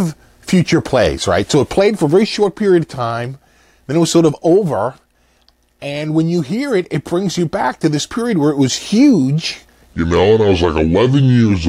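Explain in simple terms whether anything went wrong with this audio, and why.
A section at the wrong speed runs from 9.94 s to 11.69 s. The sound slows to 0.7 times and drops about seven semitones, likely from a mismatched clock.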